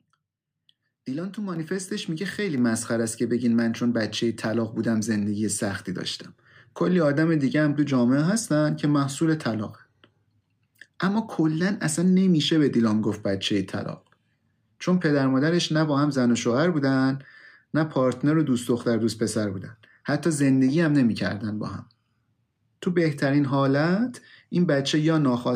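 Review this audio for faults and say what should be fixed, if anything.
Microphone volume stepped up at 1.56 s and 2.58 s: the input gain jumps by about 4 dB each time, raising voice and background together. Disable automatic microphone gain control in the call software and set a fixed input level.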